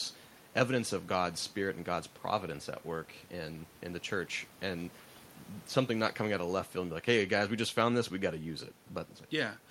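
The speech signal shows no technical fault, with only the room's own background noise audible at about 27 dB below the voice.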